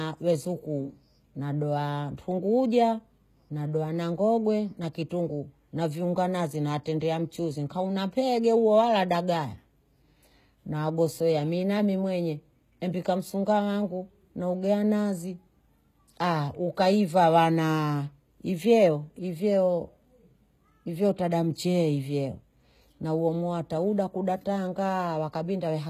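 Right through the speech there's plainly audible HE-AAC compression: gritty, lispy s sounds and nothing above 14.9 kHz, likely from a low bitrate around 20 kbps, with the treble rebuilt by band replication.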